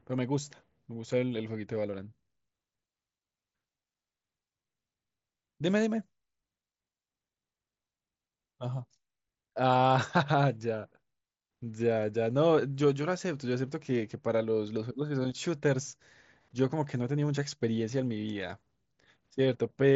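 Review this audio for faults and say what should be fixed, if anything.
No faults found, so nothing needs fixing.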